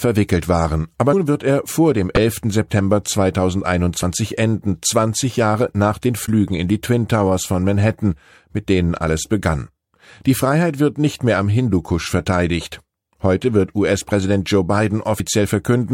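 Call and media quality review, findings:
Compressed frames skipped at 1.12 s, 2.14–2.18 s, 4.02 s and 15.19 s. Speech jumps ahead by roughly 100 ms, 20 ms, 50 ms and 50 ms. Decoder dropping missing or rejected frames.

Corrupt frame decoded at 6.26–6.29 s. Short chirp or noise burst peaking at about −20 dBFS, spanning around two frames. Flipped bits in the payload were decoded anyway, so misread gains and codes put energy at the wrong frequencies.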